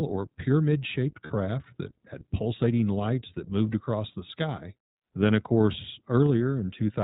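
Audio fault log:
Throughout: iLBC codec. The speech is band-limited to the narrowband range, with nothing above 4 kHz, so it sounds dull and boxed-in. Its roughness and slightly synthetic edge are plainly audible and fit the 15.2 kbps mode with 20 ms frames. Each frame's excitation is coded on its own rather than predicted from the previous one, which costs bits and leaves a rough texture on the voice.
1.26 to 1.32 s and 4.12 to 4.14 s: lost iLBC frames. The first gap lasts about 40 ms, after "or pyramid shaped" and before "that had pulsating lights", consistent with two missing 20 ms frames. The second lasts 20 ms, after "lights that moved across" and before "the sky", fitting a single missing frame. In each gap the decoder repeats the last pitch cycle blended with noise, giving a brief held, buzzy vowel. Because iLBC frames stand alone, normal speech returns immediately afterward.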